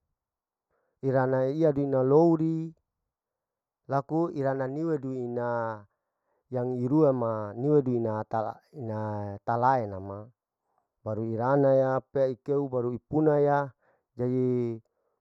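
One channel arrives a fraction of a millisecond late and sums to mono, causing channel delay (comb filtering) throughout: notches from around 3 kHz leave the speech hollow and phasey.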